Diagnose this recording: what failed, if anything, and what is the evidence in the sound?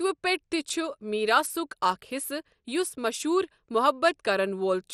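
The codec stage failed, most likely through MP2 compression at too low a bitrate. Throughout the speech, nothing is present above 13.6 kHz, and the damage is plainly audible. When Layer II has too few bits for its 32 sub-bands, it shuts off the upper bands entirely and quantises the remaining ones coarsely. The sound becomes dull, with a gurgling, granular roughness, which fits a rate of around 64 kbps.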